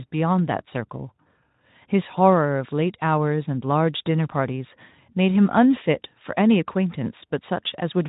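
No technical faults are audible.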